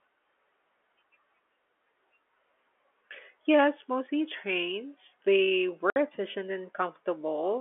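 A speech recording over a telephone-band G.711 line goes abruptly silent from 5.90 to 5.96 s, with hard edges: packet loss filled with silence, a 60 ms hole consistent with three 20 ms packets dropped.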